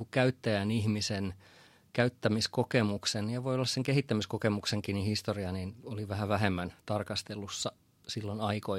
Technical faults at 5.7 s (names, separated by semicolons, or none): none